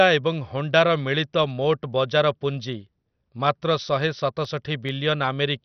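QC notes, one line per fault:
Throughout: MP2 compression, likely. The speech is dull with nothing above 6.1 kHz and a gurgling, granular texture, which fits a heavily starved 48 kbps stream. Too few bits switch off the upper sub-bands entirely and leave the remaining bands coarsely quantised and flickering.
4.01–4.89 s: CD scratch ticks. Five short ticks, the longest around a millisecond, recur at a steady rate of roughly six per second. Each marks a disc revolution where damaged data exceeded error correction and the player interpolated or muted the lost samples.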